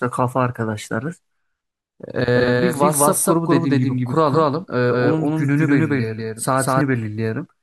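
From about 2.35 s to 6.81 s the speech gets a doubled audio track: a second, equally loud copy trails roughly a fifth of a second behind, dry and full-band, snapping in and out abruptly. Likely a slower capture path mixing the signal in twice.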